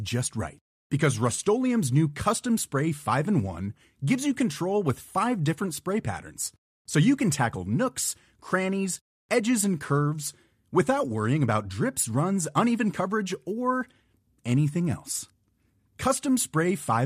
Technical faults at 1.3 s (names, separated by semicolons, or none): AAC frame loss with concealment